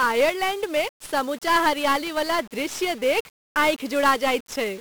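1-bit DFPWM compression throughout: one bit per sample nudges an adaptive level, leaving heavy broadband noise, crackly fuzz, and treble buried in hiss.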